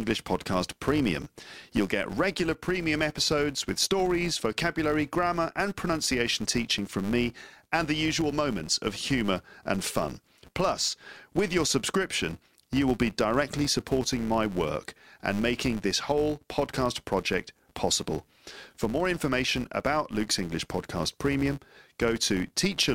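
From start to finish the speech carries a buzz at 200 Hz, the signature of a filter restarted on every block. The filter discards its memory at each block boundary and begins again from silence, so every block opens with a small transient. A 200 Hz rate points to blocks of 5 ms. The buzz swells in loud passages and fades in quiet ones. A waveform shows regularly spaced ticks riding the signal, and a spectrogram shows a comb of lines at 200 Hz and its harmonics.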